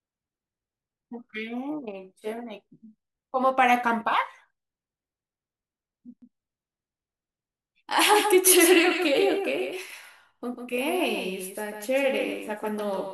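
From 6.22 s to the end, the speech carries a doubled audio track: a second full-band copy trails about 150 ms behind, a few dB quieter. It starts abruptly and has no decay or room colour, unlike echo, likely from a slower second capture path.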